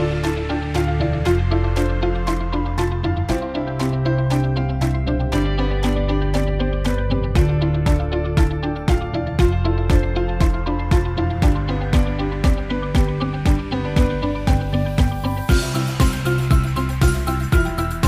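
No technical faults can be heard anywhere in the audio.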